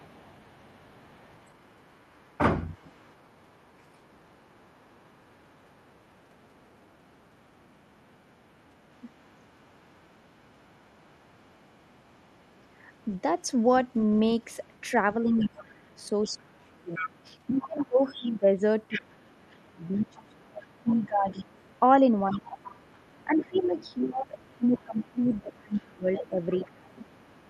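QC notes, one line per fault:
0.00–13.41 s, 13.99–14.82 s and 15.40 s to the end, other side's voice leaking through: a faint second voice sits under the speech, about 35 dB below it in the first two stretches and rising to about 20 dB below from 15.4 s. The likely cause is far-end audio from the talker's loudspeaker reaching the microphone and surviving an echo canceller that only partly removed it.
2.94–2.98 s, 15.24–21.62 s and 22.34–27.01 s, speech suppressed in double talk: the first event is a brief 40 ms dip of about 10 dB. The later two are long, uneven stretches where the voice keeps ducking or thinning, by up to about 25 dB for around five seconds in total, then up to about 20 dB for about three seconds. These coincide with the louder leakage, likely because the echo canceller could not separate the talker from loudspeaker echo and attenuated both.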